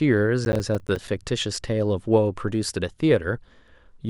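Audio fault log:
0.45–1.08 s processor overload crackle: gritty crackling tears through the speech, from a run of missed processing deadlines leaving hard-edged silent gaps, suggesting about ten dropped 10 ms buffers.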